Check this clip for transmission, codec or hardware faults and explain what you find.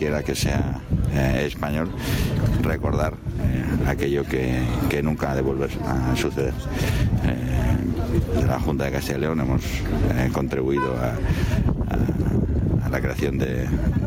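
One hardware-side fault runs through the whole clip: gain pumping. The level rises and falls throughout, with the gain being pulled down on loud passages and recovering in the spaces between them, a swing of around 15 dB. The likely cause is input gain set far too high for the microphone, so a fast limiter or compressor clamps down on each loud sound and then releases. The result is a squashed, breathing dynamic, with loud and soft parts pushed closer together in level.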